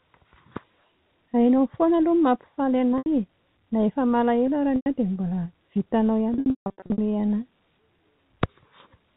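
At 2.98 s, 4.76 s and 6.34–6.98 s, packet loss with pitch repetition replays the last pitch period, showing as identical repeating waveform cycles and smeared horizontal harmonics before fading.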